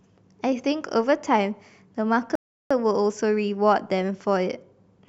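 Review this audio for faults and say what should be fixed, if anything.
Silence cuts in from 2.35 to 2.7 s, then the speech resumes exactly where it left off. This is a rebuffering stall, where playback ran dry of downloaded data and added 0.35 s. A larger startup buffer and adaptive bitrate switching would keep the player ahead of the download.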